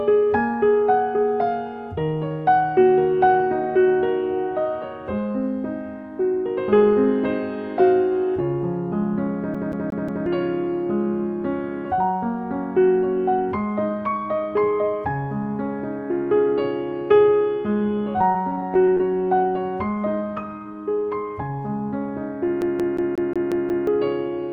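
CD stuck on one turn, from 9.54 to 10.26 s: a scratch keeps throwing the laser back to the same point, so a 180 ms slice of sound plays four times in a row, each pass cut off by a brief mute at the jump. The result is a fast, evenly spaced stutter, the familiar hiccup of a skipping disc, before playback moves on.

Repeated packet loss (robotic sound), from 18.13 to 19.00 s: audio packets went missing over and over. About a dozen short holes, the longest around 21 ms, are each patched by stretching the last sound forward, about 140 ms of patching in all, while about 100 ms goes missing outright. The passage turns choppy, with small pieces dropped. This happens on a call path that sounds band-limited to about 12 kHz, which fits an Opus stream.

CD stuck on one turn again, from 22.61 to 23.87 s: the same 180 ms loop length returns, now repeating seven times, with a short mute at each jump. 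That run of the stutter lasts longer than the first.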